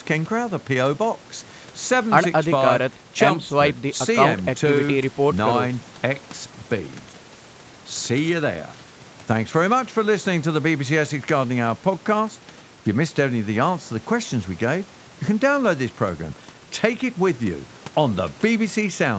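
No technical faults can be heard in this speech recording.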